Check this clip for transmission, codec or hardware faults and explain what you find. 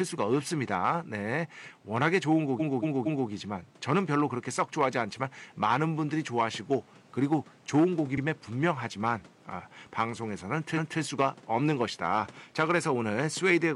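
There is one codec-side fault, repeated frames, occurring three times. The room noise is about 28 dB below the speech.

Repeated frames: At 2.56–3.25 s a 232 ms block plays three extra times, a stutter. At 8.13 s a 46 ms slice repeats once, and at 10.73–10.96 s a 232 ms block repeats once. The 232 ms block length fits five 46 ms frames. Compressed frames were duplicated before decoding, lengthening the audio. A waveform or spectrogram shows identical adjacent segments.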